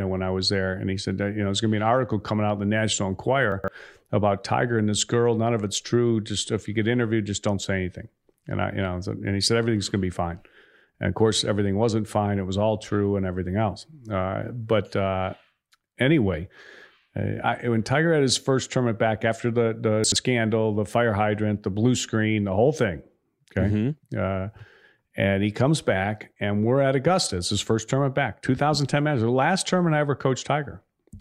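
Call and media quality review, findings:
Chunks out of order, 3.52–3.68 s: brief jumbled stretch of speech with hard joins. One segment plays roughly three segments late. The spacing fits 40 ms chunks. Probable component: jitter buffer or playout write path releasing a late chunk instead of slotting it back in place.

Chunks out of order, 20.04–20.16 s: same garbled symptom, shorter. Fits a 40 ms chunk played about two positions late. Same reordering mechanism.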